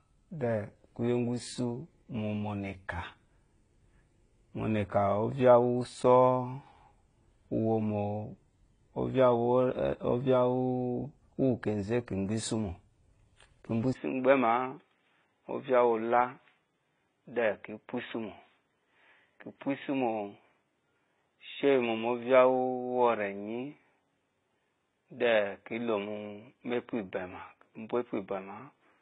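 From the first moment to the end, the speech carries the marks of transcoding between lossy codecs. Nothing reaches above 9.8 kHz, and the smeared, swirly high end of a low-rate spectral-band-replication codec sits under a second layer of coarse AAC quantisation, which fits a likely chain of HE-AAC at around 16 kbit/s re-encoded to AAC-LC at 32 kbit/s. On a spectrogram the energy stops at a hard ceiling at 9.8 kHz, with blocky, patchy texture in the upper bands.

At 13.93 s a 20 ms gap drops the signal out, and the input switched to a poorer device, most likely another microphone or a headset's call profile. From there to the end nothing passes above 3.8 kHz, so the speech turns narrow and boxy with no noticeable level jump, and a faint new noise floor sits roughly 55 dB below it. A waveform shows a brief flat notch at the switch, and a spectrogram shows the ceiling falling abruptly from 9.8 kHz to 3.8 kHz.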